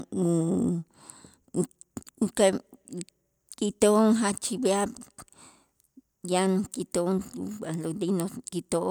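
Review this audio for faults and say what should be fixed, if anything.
Nothing to fix; no faults found in this speech recording.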